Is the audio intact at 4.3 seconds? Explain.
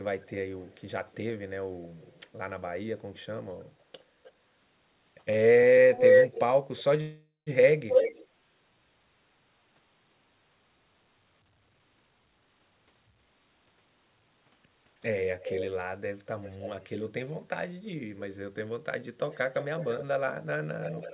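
No. From 4.23 to 4.32 s there's an echo leak: a faint copy of the speech, 307 ms late, likely a loudspeaker pickup the echo canceller missed.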